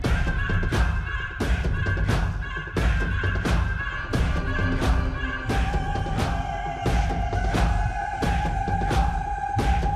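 Nothing in the clip stood out as a technical fault on listening.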